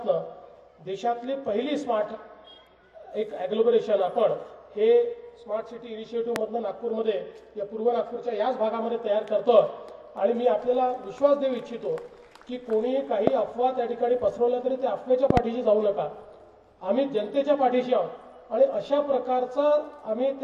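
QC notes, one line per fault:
6.36 to 6.38 s, 13.27 to 13.30 s and 15.30 to 15.39 s, loud pop: a sharp pop stands roughly 20 dB above the sound at each time, single at the first two and a quick double at the third, with the sound continuing beneath. The likely cause is a sudden voltage step, from a plug, switch, static discharge or driver glitch, entering the signal path and being shaped by the following circuits into a brief percussive burst.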